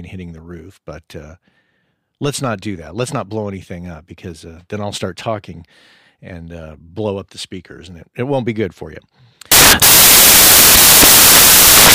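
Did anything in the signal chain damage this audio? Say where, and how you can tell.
Yes, at the sample-format conversion stage. From 9.52 s, right after "be good for you", to the end at 11.94 s, the speech turns into loud, harsh broadband noise. These are samples built from the wrong bytes: misassembled bytes push the fast-changing low bits into the top of each value.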